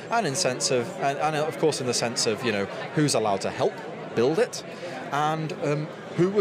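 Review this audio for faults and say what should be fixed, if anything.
No faults are audible anywhere in the recording, so nothing needs fixing. There is nothing to prevent.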